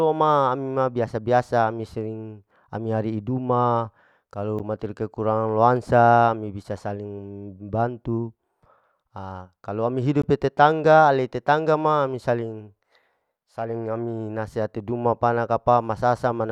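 The playback program likely failed twice to fill its output buffer in time, so blocks of digital silence replaced the speech. At 4.59 s, right after "ari'i duma kalu", a gap of about 11 ms opens, which fits a 512-sample buffer. At 10.22 s, after "ha kalau ami", a 16 ms gap follows. Each cuts abruptly out and back with no fade. The first, under 15 ms, is heard as a tick or dip rather than silence; the second, at 16 ms, is just past that point.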